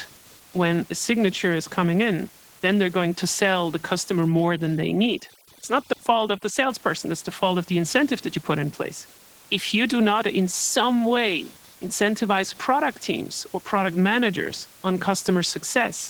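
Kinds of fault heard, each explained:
Computer activity noise: a faint buzz pulsing roughly 500 times per second, far below the speech; the spectrogram shows comb lines near 500 Hz unrelated to speech.
Opus voice compression: plainly audible low-bitrate damage throughout, with hoarse, slightly robotic speech that fits hybrid mode near 16 kbps; the spectrogram shows blocky, smeared upper-band texture.
Overdone noise removal: from 4.28 to 6.70 s the room noise drops and breaks up into twinkling specks; the spectrogram shows isolated flickering dots and holes.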